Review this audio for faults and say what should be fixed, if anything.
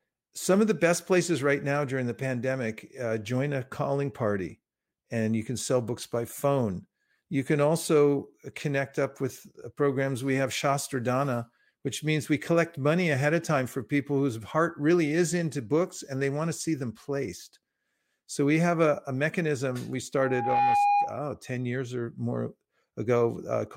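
There's a loudspeaker feedback squeal from 20.17 to 21.25 s, kicking in right after "a a mechanism we". A single tone at 816 Hz swells up over roughly 0.4 seconds and ends up sitting about 5 dB above the speech. That's the mic catching the speaker it feeds, with the loop gain tipping past one at that frequency, so the tone keeps reinforcing itself until the loop is broken. To prevent it, pull the mic back or aim it away from the speaker, or notch out around 816 Hz in the monitor feed.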